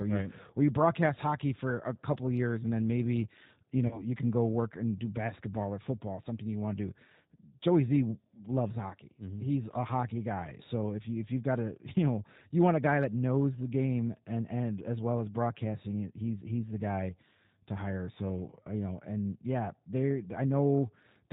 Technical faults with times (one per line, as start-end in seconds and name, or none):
0.00-21.33 G.729 codec
3.87-4.07 VoIP packet loss concealed by the speech codec